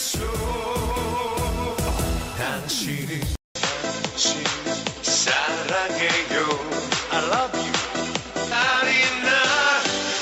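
At 3.35 s the sound drops out for 200 ms and returns narrower, with nothing above 7.6 kHz and a new, faint noise floor roughly 45 dB below the signal, while the overall level stays about the same. That persistent change in bandwidth and background through to the end points to an input switched to a poorer device, likely another microphone or a headset call profile. A codec bitrate drop would instead leave the same room noise and bring swirling artefacts. At 8.51 to 8.54 s the sound jumps forward with a small blip, the mark of a stream segment skipped: a chunk of the stream likely failed to load and playback resumed at the next one. Unlike a dropout or buffer underrun, the audio does not pause and resume where it left off. Material is simply missing, so the continuity breaks.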